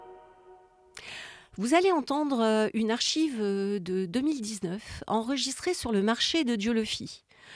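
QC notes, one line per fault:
No faults heard anywhere in the clip.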